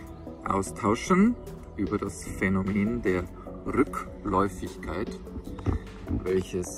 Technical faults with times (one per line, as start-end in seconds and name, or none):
3.02-5.73 call bitrate drop